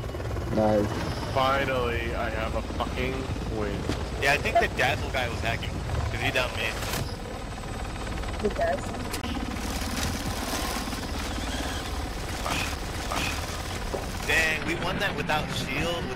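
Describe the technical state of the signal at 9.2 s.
A CD skip runs from 9.21 to 9.24 s: the laser jumps tracks, muting about 20 ms with a tick, showing as a thin vertical gap and a waveform discontinuity.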